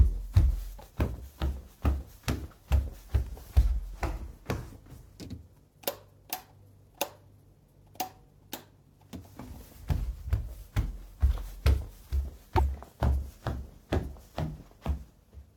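At 0.76 to 0.81 s and again at 12.57 to 12.60 s, damaged data in a compressed stream makes the decoder misread frames and lose sync, producing a brief chirp or blip. A spectrogram shows a short broadband smear; the waveform shows an abrupt, jagged discontinuity.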